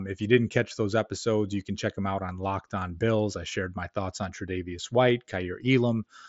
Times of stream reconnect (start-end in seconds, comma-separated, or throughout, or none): none